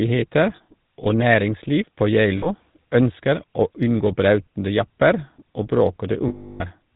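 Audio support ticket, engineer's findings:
GSM full-rate codec across the whole clip: speech squeezed through a vocal-tract model driven by sparse regular pulses, band capped at 4 kHz, consistent with 13 kbps GSM. Heard as a constant buzzy, gravelly roughness and dull top end.

Lost GSM frames at 0.56–0.61 s, at 2.38–2.48 s (after "næringsliv på", before "ønsker å unngå brautende"), and at 6.28–6.62 s (after "unngå brautende japper og"). Decoder repeats the last good frame. Short gaps of about 40 ms, roughly two frames each, give a brief metallic ring. The last gap, about 320 ms, gives a longer metallic ring.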